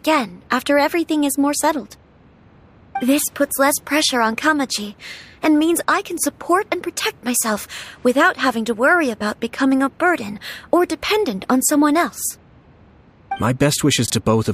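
At 14.06 to 14.1 s, near the very end, the sound has chunks out of order: one 20 ms block arrives a chunk late and plays after its successor. Nothing is missing, but the swap leaves three hard joins, heard as a brief jumbled stutter. A spectrogram shows vertical broadband lines at each join, and the waveform jumps abruptly there.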